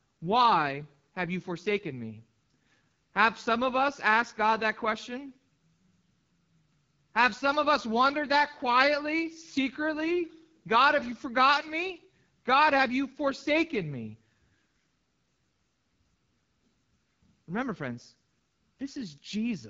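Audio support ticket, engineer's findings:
AMR wideband (HD Voice) codec, full length of speech. Rough, raspy texture on every phrase. Codec damage plainly audible. Nothing above 7.5 kHz. Top band sounds hissy, not detailed. The low-band vocal model is starved of bits, so the pulse excitation coarsens. The upper band is filled with shaped noise. The rasp points to one of the two lowest AMR-WB modes, consistent with 8.85 kbit/s.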